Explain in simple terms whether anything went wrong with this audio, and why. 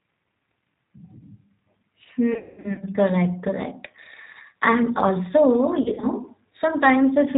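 Yes, two things went wrong. Throughout, the speech sounds slightly rough, thin and synthetic, because the G.729 codec rebuilds the voice from a simplified model and discards everything above 4 kHz. Between 2.34 and 2.84 s, and again between 5.82 and 6.07 s, the voice turns buzzy, smeared and fading. This is VoIP packet loss concealed by the speech codec: chunks of audio went missing, and the decoder filled the gaps by stretching out the last sound it had.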